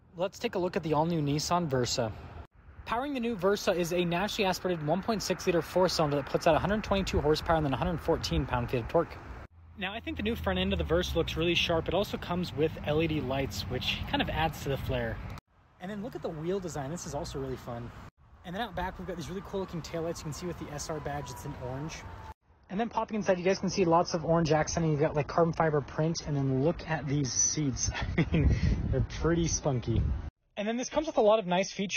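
From 22.37 s to the end, the treble abruptly vanishes above 6.5 kHz with no gap: an adaptive stream switched to a lower bitrate, consistent with roughly 24 kbit/s AAC.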